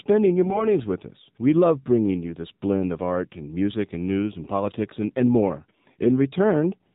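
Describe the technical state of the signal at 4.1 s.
At 4.1 s the speech sounds thin, buzzy and synthetic, with nothing above 4 kHz and a plainly audible coarseness. The cause is the AMR narrowband mobile codec, present throughout the clip rather than at this moment alone. The codec samples at 8 kHz and rebuilds the speech from a vocal-tract model excited by a few pulses per 5 ms subframe. The degree of buzziness fits one of its lower modes, around 7.4 kbps.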